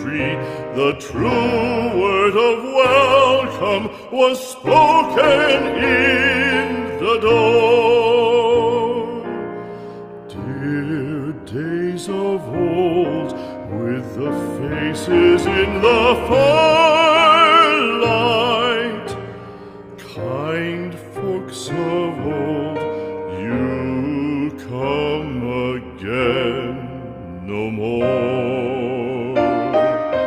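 From 2.87 to 6.47 s the audio turns coarse and muffled, staying worst for about 2.8 s: a call bitrate drop, consistent with the encoder falling from roughly 32 to 16 kbps.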